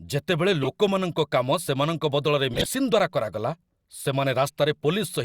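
At 0.62 to 0.68 s there's a short burst of corrupt frame decoded, peaking around -10 dBFS. Damaged bits in a few compressed frames got played anyway, so misread gains throw energy into the wrong frequencies as a squeaky blip. A longer one runs 2.51 to 2.68 s, right before "ଦ୍ୱାରା କରାଗଲା", spanning several frames at a similar level. The last, 3.95 to 4.02 s just after "ଦ୍ୱାରା କରାଗଲା", is quieter, around -20 dBFS.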